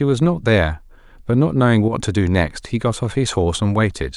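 From 1.88 to 1.93 s the speech dips abruptly by about 6 dB without going silent, likely one stereo channel dropping out before the mono sum, unlike a full dropout.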